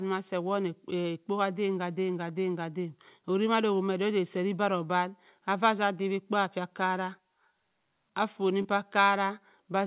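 Short concealed packet loss at 8.62 to 8.66 s: about 20 ms of speech reached the decoder too late, so the receiver extended the preceding sound across a 23 ms patch before blending back. It is heard as a brief smear or wobble, in audio that stops near 4 kHz.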